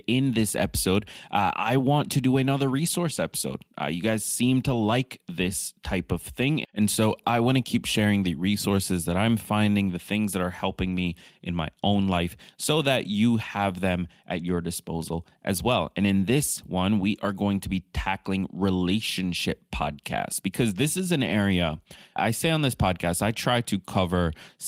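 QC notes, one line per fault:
10.87–10.97 s, lost packet rebuilt from error correction: between "the things that are" and "me in my own", rougher, noisier fill from low-bitrate copies; no gap, but the spectrogram shows brief smearing.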